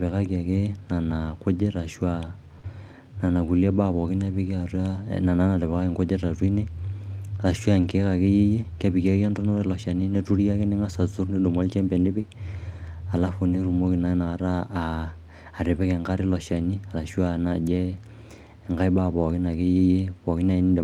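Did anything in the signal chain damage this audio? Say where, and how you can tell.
Yes. The damage is in the network stage, with the codec's loss handling shaping what you hear in this speech clip.

Lost packet rebuilt from error correction, at 0.53, 4.23, 7.83 (just before "ake iyie kepiki ake"), 10.59 and 15.81 s (just before "enkare ilo"). Each is about 20 ms, one packet's worth. There's no dropout, but each spot turns briefly grainier and noisier. The packet never arrived, and the decoder played the low-bitrate backup copy carried in the following Opus packet, so the frame is present but coarsely coded.

Short concealed packet loss, at 2.59 to 2.65 s, 7.81 to 7.85 s, and 12.21 to 12.25 s (just after "ning'as aturr nidumu oljembe"). About 40 ms of sound is filled at the first point and about 20 ms at the other two. Each is heard as a brief smear or wobble. Nothing arrived in time for those frames and no backup copy was available, so the decoder extended the preceding sound and then crossfaded back into the real audio.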